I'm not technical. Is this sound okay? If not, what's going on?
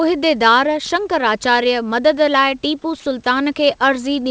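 Yes, no faults here.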